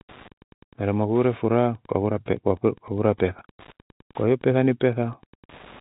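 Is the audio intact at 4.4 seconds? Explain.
No, Wi-Fi interference runs through the whole clip: a nearby radio's rectified beacon ticks every 102.4 ms, faint beneath the speech, appearing as evenly spaced thin vertical lines on a spectrogram.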